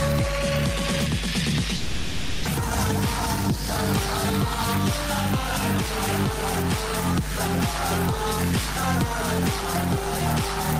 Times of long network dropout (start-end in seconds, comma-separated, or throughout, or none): 1.76-2.47